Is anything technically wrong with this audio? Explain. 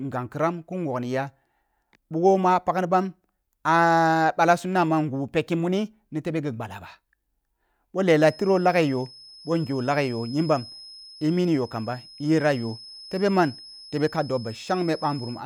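Yes. From 8.09 s to the end of this speech clip a feedback whistle sits behind the voice: a thin, steady tone at 5.2 kHz, about 20 dB below the speech, swelling and fading slowly in level. The likely cause is a loudspeaker-to-microphone loop held just at the edge of feedback, so one frequency keeps ringing without building up. On a spectrogram it shows as a single bright horizontal line at 5.2 kHz; the waveform barely changes, since the tone is much quieter than the speech.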